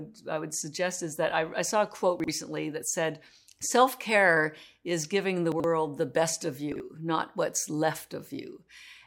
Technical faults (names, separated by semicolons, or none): chunks out of order